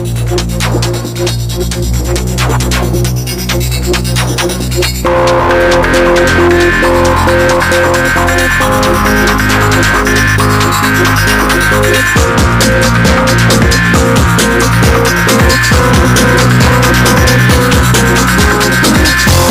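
Hard clipping runs through the whole clip, from start to finish. The signal reaches a stage about 13 dB hotter than that stage can pass, so every peak is sliced flat at the ceiling, and roughly one sample in seven sits pinned there. Those squared-off tops generate harmonics reaching high into the spectrum. At this degree of overload the result is not occasional crackle but a harsh, gritty fuzz riding on every loud moment of the sound.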